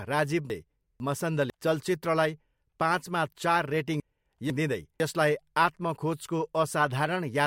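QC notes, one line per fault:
0.5–1.5 s, chunks out of order. Two 500 ms blocks play swapped, so the later half-second comes before the earlier one. Nothing is missing, but the order is wrong. Three hard joins give a jumbled moment just before "चलचित्रलाई पाँचमा चार रेटिङ".
4.0–5.0 s, chunks out of order. Just after "चलचित्रलाई पाँचमा चार रेटिङ", the same swap recurs. One 500 ms block arrives a chunk late and plays after its successor. At the abrupt seams the sound briefly jumps back and forth.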